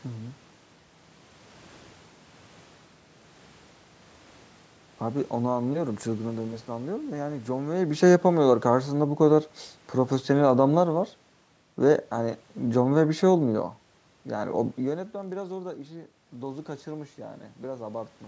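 Speech in which the level twice sinks by about 3 dB, from 7.66 to 9.39 s and again from 11.81 to 13.77 s, with the background dropping along with the voice. That is automatic gain falling: the gain control judged the input too loud or its background noise too strong and eased its gain down. From 15.09 to 16.90 s a low, regular buzz at 43.1 Hz rides on the sound and tracks its loudness. This is a filter restarted on every block. It loses its state at each block boundary and starts from silence, so every block opens with a small click, at a rate that fits a 1024-sample block. The talker's own shifts in distance, around 7.5 s and 14.5 s, and the room noise are part of the recording rather than system faults.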